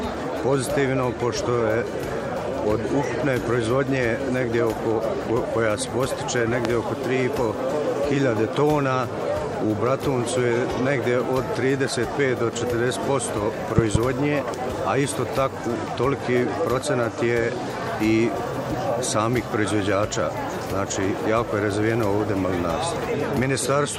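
A loud pop hits at 6.65 to 6.68 s, a single sharp spike standing roughly 20 dB above the sound, which continues underneath. At 13.78 to 13.98 s come two more pops in quick succession, about 15 dB above the signal. A voltage step from a switch, plug or static discharge is the likely cause. On a waveform each pop is a tall, narrow spike, and on a spectrogram it is a thin vertical stripe across all frequencies.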